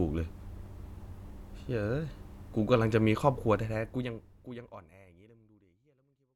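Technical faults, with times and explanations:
No technical faults are present in this recording. The ending has a smooth fade out that begins at around three and a half seconds and reaches silence by 6.36 s, with no click or hard edge.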